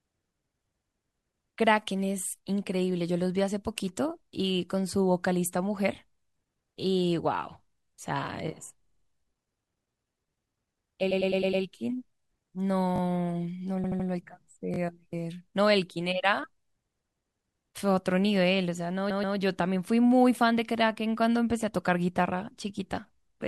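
A speech clip with two kinds of stutter. Repeated frames occur at 8.83 to 9.04 s, 11.11 to 11.63 s, 13.84 to 14.07 s and 19.10 to 19.36 s. In each, a short block of coded audio plays again several times. The blocks last 52, 104, 78 and 131 ms. They repeat four, five, three and two extra times. That fits a few compressed frames being written or sent more than once. The decoder simply replays them. The clip grows longer by the repeated time, from 0.21 to 0.52 s per event. A repeated buffer appears at 12.96 to 13.00 s and again at 14.74 to 14.78 s. Here a 20 ms piece sounds twice more, with hard joins. This points to playback audio arriving late, so the device replayed its last small buffer. Little or no audio seems lost.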